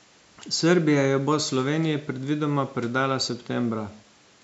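Nothing goes wrong in this bit of speech; it has simply passed through a call's microphone processing, so the very lowest bass is trimmed away and nothing sits above 8 kHz, which is just how that path normally sounds.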